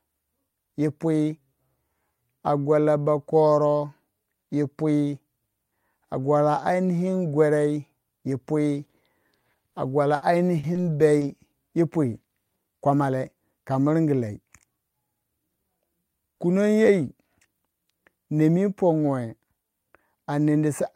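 A speech recording with several network dropouts. The main one is a burst of packet loss at 10.15 to 10.23 s. About 60 ms of audio simply never arrived, and the receiver covered the hole by carrying the last sound forward and letting it fade, so you get a brief held buzz or hiss before things pick up again slightly further along, with that slice gone. Around it there's a cluster of short concealed packet loss at 10.59 to 10.65, 10.73 to 10.77 and 11.19 to 11.23 s, plus an early one at 0.49 to 0.55 s. Each of those drops only 20 to 40 ms, which the decoder papered over by extending the sound just before it and blending back in. They come across as quick smears or little wobbles, and a short consonant can disappear in one. The bunching around 10 to 11 s points to the connection going rough for a second or so.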